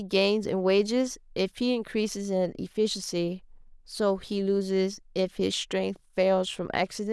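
No technical faults can be heard anywhere in this speech, so there is nothing to describe in time order.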